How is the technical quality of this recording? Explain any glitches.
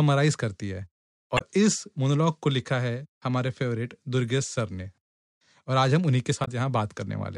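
The recording has two short glitches, both from damaged data in a compressed stream. They fall at 1.37–1.42 s and 6.44–6.48 s, each lasting about 50 ms or less. At those points the stored bitstream is corrupt, so the decoder cannot read the affected frames correctly, loses frame sync and has to find the next valid frame header. What reaches the ear is a brief chirp, squawk, click or short hole cutting across the speech.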